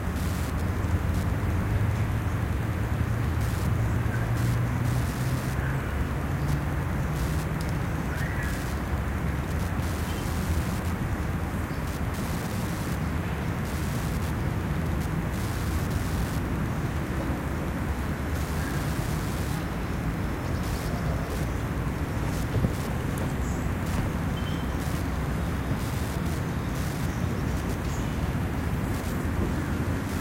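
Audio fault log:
Throughout: Wi-Fi interference. A steady ticking runs under the sound at just under ten ticks per second, one every 102.4 ms. That spacing matches a Wi-Fi beacon. A radio transmitter sits close to the audio circuitry, and the circuit rectifies each radio burst. Each burst becomes a short audible click. The ticking sits roughly 20 dB below the main sound.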